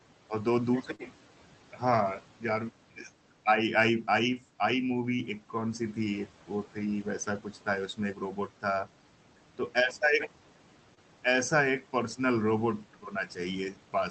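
Speech heard over a call path whose content stops near 8 kHz has two brief dropouts that show short concealed packet loss. The first is at 0.95 to 1.01 s, where about 40 ms went missing. The second is at 10.95 to 10.99 s, where about 20 ms was lost. Each time the receiver patched the gap by extending the preceding sound and then cross-faded back, so the audio smears or wobbles briefly.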